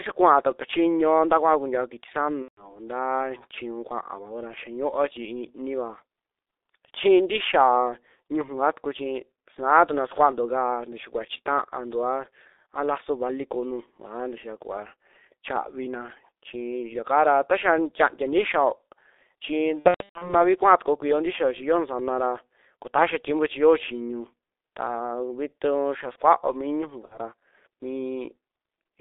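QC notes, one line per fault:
throughout, G.723.1 codec: the audio is squeezed into a phone band of roughly 300 Hz to 3.7 kHz and heavily coded, likely at the 6.3 kbit/s mode. Slow 30 ms frame updates leave the speech muffled and hoarse, with smeared consonants.
2.42–2.80 s, 19.79–20.35 s, 24.44–24.50 s, 27.05–27.17 s, VoIP packet loss concealed by the speech codec: the decoder fills each gap by repeating its last pitch and filter while fading the gain, so the speech turns into a buzzy, dying tone. The first dropout comes right after "nta kuaao kuntiao kiti" and sounds like about 150 ms of missing frames. The second is patchy, about 330 ms lost across 420 ms just before "kuaa tukuo kuio ntixiao". The last two are short, around 60 ms each. The speech stays thin for a moment after each one.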